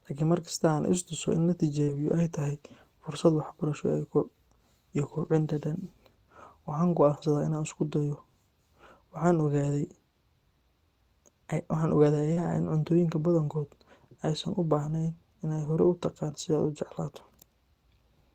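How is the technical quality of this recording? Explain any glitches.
The speech has a handful of network-loss glitches clustered in a few spots.

Short concealed packet loss hits at 1.83 to 1.89 s and 12.33 to 12.38 s. About 40 ms never arrived, so the decoder extended the previous sound, giving a quick smear or wobble.

Lost packets rebuilt from error correction show up at 1.87 to 2.13 s, 5.13 to 5.43 s, 12.36 to 12.46 s, 14.84 to 14.90 s and 17.18 to 17.20 s. Later packets carried low-bitrate backup copies of the missing audio, so the decoder played those instead. The result is no gap, but briefly rougher, noisier stretches of 20 to 160 ms.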